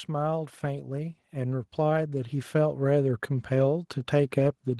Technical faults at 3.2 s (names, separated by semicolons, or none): automatic gain rising